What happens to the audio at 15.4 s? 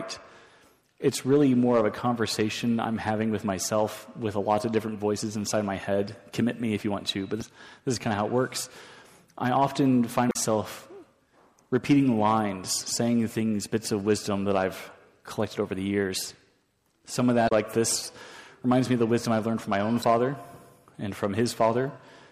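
MP3 compression is audible at 15.4 s, as it is across the whole clip, with plainly audible damage. The likely cause is an encoder starved of bits, which fits a rate of about 64 kbps. It drops weaker frequency components, which blink on and off between frames. At that moment the sound is watery and swirly, with metallic chirps on bright, hissy content and smeared attacks.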